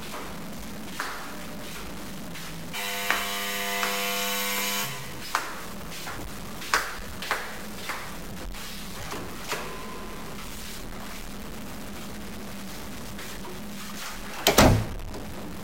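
A recording of sounds with a stuck bit running through its whole length. A harsh, buzzy distortion rides on everything. Quiet stretches fill with a gritty noise floor. The error step sits around -35 dBFS. The likely cause is a broken data line or converter holding one bit fixed.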